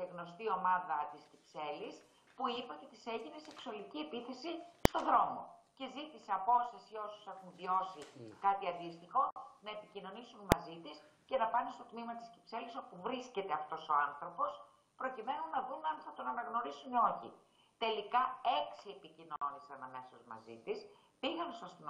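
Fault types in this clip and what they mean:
Invalid numbers at full scale: A processing stage produced infinite or undefined values, and these were clamped to the extreme positive or negative sample value, pinning the output at one extreme far beyond the audio's peaks for one short block. Here each block lasts about 0.73 ms, which fits a 32-sample block. That is too brief for separate edge pops, so each is heard as a single sharp bang, at 4.85 s and 10.52 s.
Gap at a join of encoded pieces: The audio was encoded in separate segments that were joined without removing the encoder's start-up delay or the padding in each segment's final frame, so silence remains at each join. Here the segments fall every 10.0 s. Dropouts of 53 ms at 9.31 s and 54 ms at 19.36 s cut into otherwise continuous sound. Their edges are smeared by the codec, and the sound resumes where it stopped.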